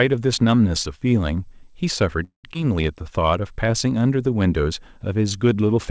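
At 2.24 s the speech stops for about 0.22 s, until 2.46 s, in what sounds like a call audio freeze. The last sound carries on briefly as a fading buzz, then goes fully silent for about 120 ms before the speech resumes exactly where it broke off. The likely cause is packets held up in transit, so that the jitter buffer ran dry and the receiver filled roughly 200 ms of gap. Because nothing is lost, this differs from a dropout that cuts material away. Part of the delay it adds is undone a moment later.

At 2.54 s there is a skip ahead, lasting only about 30 ms. Playback jumps forward, and roughly a tenth of a second of speech is missing. The two sides are joined with only a tiny 9 ms bridge, so it comes across as a clipped or abrupt transition rather than a pause. Unlike the freeze, there is no audible hole here. The speech simply lurches forward, and that recovers about 100 ms of the delay that had built up.

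From 2.95 s to 3.72 s a jitter buffer slow-down stretches the speech to 90 percent speed. The receiver repeats single pitch periods to add 86 ms of reserve. Pitch stays the same while sounds are drawn out. This is what separates it from a tape-style slowdown, where the pitch would drop. Throughout the clip, nothing is heard above 8 kHz, consistent with a wideband call codec.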